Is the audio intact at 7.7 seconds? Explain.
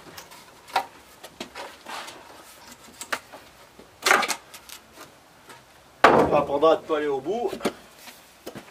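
No. At 7.68 s, compressed frames are skipped: about one frame, which fits a 26.1 ms frame size, is missing or rejected by the decoder, so roughly 30 ms of audio drops out. Playback jumps ahead abruptly, leaving a brief discontinuity at the join.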